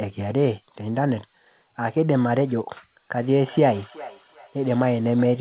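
From 3.45 s right through to the end of the clip at 5.41 s there's a feedback echo between two devices. A second device in the same room is playing the call back into this microphone, and the local echo canceller can't touch it, so the speech loops round roughly every 0.4 s. Each pass comes back thinner and ringier, peaking at about 19 dB below the speech. All of it sits inside the narrowband, 4 kHz-limited sound of the call codec.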